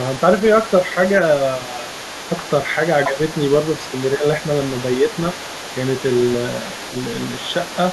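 From the start and throughout the clip, a second voice runs underneath the speech, about 15 dB below it: the other side's voice leaking through. It is likely far-end loudspeaker sound reaching the microphone, which the echo canceller failed to fully remove.

At 3.07 to 3.18 s and again at 4.16 to 4.24 s, the speech briefly dips, mildly the first time and by roughly 10 dB the second. This is speech suppressed in double talk, likely the echo canceller attenuating everything while both sides overlapped.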